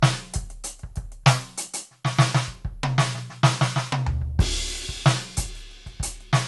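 From start to finish the music carries generation loss: the top end stops dead at 11.8 kHz, and beneath that the texture swirls and sounds hollow, with transients smeared rather than struck. The likely cause is repeated lossy re-encoding, around seven passes through a codec that points to MP2 at about 96 kbit/s, each pass adding fresh quantisation noise on a shifted frame grid. A single encode at that rate would sound cleaner. The compounding smear marks it as repeated encoding.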